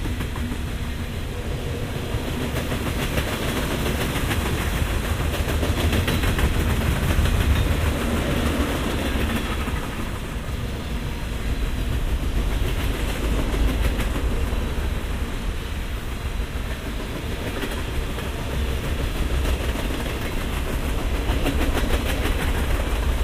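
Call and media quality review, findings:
Nothing to flag here; the sound came through without any problems worth a ticket.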